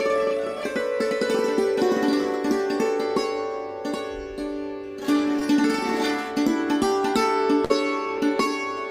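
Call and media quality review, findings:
Brief smear at 5.39–5.43 s. Short concealed packet loss: about 20 ms of audio missing, jitter buffer filled the gap by extending the preceding sound.

Fading concealment fill at 7.65–7.72 s, then a jump ahead. Burst of packet loss: about 40 ms missing; decoder concealment repeated and attenuated the last sound before resuming.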